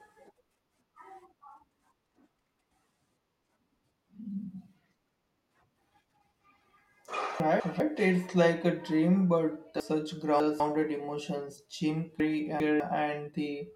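Speech, with chunks out of order in three spots: 7.4–7.8 s, 9.8–10.6 s and 12.2–12.8 s. A 200 ms chunk lands one, three and two chunks late respectively, so each moment sounds jumbled, with hard joins where the audio is stitched back wrongly.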